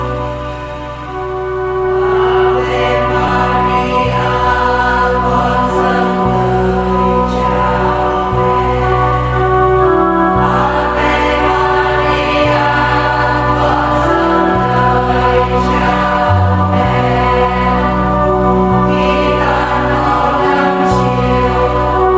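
Nothing technical stands out in this audio at any point, so there's no fault here to pin a time or a cause on.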